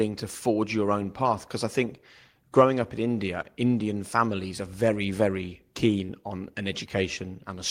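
A short concealed packet loss hits this speech recording at 6.05 to 6.10 s: about 20 ms of the call failed to reach the decoder in time, and the receiver patched the gap with roughly 21 ms of synthesised continuation extrapolated from the preceding sound before crossfading back into the real signal. Across those few hundredths of a second the speech briefly smears and wobbles, a small seam in an otherwise continuous stream.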